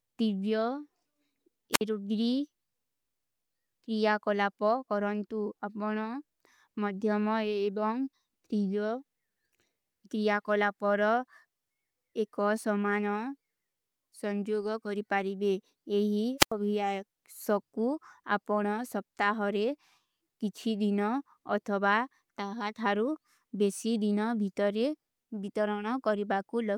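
At 1.72 s the speech breaks up in a wireless microphone squelch dropout. Hiss swells briefly, then the output goes near silent for about 56 ms before the voice returns by 1.81 s. The radio link from the analogue FM transmitter faded. The receiver's squelch then muted the weak, noisy signal. The same thing happens again from 16.38 to 16.52 s. That hole is longer, about 88 ms.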